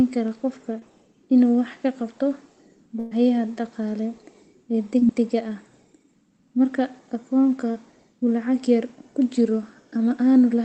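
At 0.79 to 0.83 s, between "kara qofka" and "inuu wax ka qabto", a short concealed packet loss leaves a brief smear. About 20 ms never arrived, and the receiver extended the previous sound to cover it. From 2.99 to 3.13 s, a burst of packet loss removes about 120 ms. The decoder stretches the last sound into a fading fill before the audio resumes further on. Two more short concealed losses follow, at 4.99 to 5.03 s and 7.71 to 7.75 s. Each is a quick wobble where about 20 ms was patched over. The call codec's band, which ends near 8 kHz, stays the same throughout.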